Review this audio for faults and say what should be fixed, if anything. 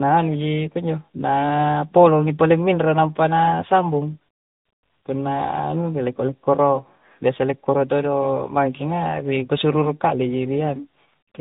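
Tandem speech coding runs through the whole clip. The speech sounds rough, muffled and warbly because it was decoded and re-encoded at each link, from CVSD through G.711 to AMR-NB at 10.2 kbit/s, so two speech coders stacked their errors. A spectrogram shows a hard ceiling at 3.8 kHz. To prevent it, keep the call in one codec end to end, or use transcoder-free operation.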